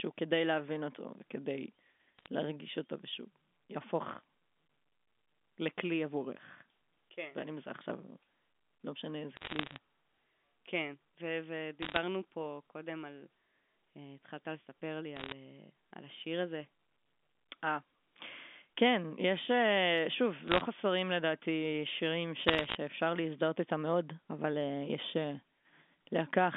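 Bit errors on a digital phone line crackle through the speech at 2.19–2.26 s, 9.37–9.78 s, 11.82–11.97 s, 15.16–15.32 s, 20.48–20.61 s and 22.48–22.75 s. Flipped bits corrupt single samples, so sharp ticks sit over unbroken speech, not the gaps of lost packets.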